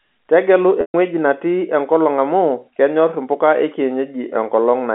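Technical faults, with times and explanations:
0.81–0.94 s: packet loss with pitch repetition. Roughly 130 ms of speech goes missing. The receiver loops the last pitch period to cover the gap, giving a brief buzzy hold that fades to silence before the speech resumes through a short cross-fade.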